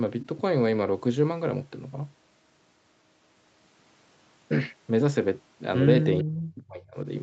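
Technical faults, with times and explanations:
6.23 to 7.06 s, speech suppressed in double talk: the speech sinks by around 35 dB and breaks up in pieces, about 0.7 s in all. This is likely an echo canceller that heard both sides at once and turned the talker down with the echo.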